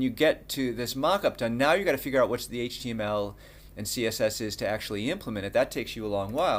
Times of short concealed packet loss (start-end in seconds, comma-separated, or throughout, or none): none